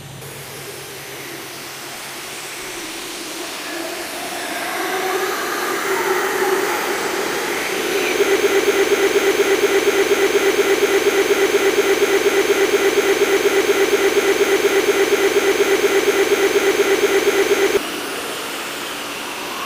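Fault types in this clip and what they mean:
Broken-record loop: from 8.36 s to 17.77 s the audio repeats one fragment of about 0.24 s, 39 times back to back, so the sound turns into a stuttering, mechanical pulse, and whatever should have sounded in those nine seconds is gone. The likely cause is a player, encoder or stream stalling and resending its last buffered piece. On a spectrogram it appears as identical vertical slices tiling every 0.24 s; the waveform shows the same shape stamped repeatedly.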